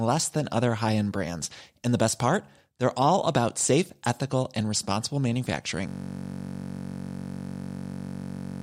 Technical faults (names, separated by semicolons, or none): system hang loop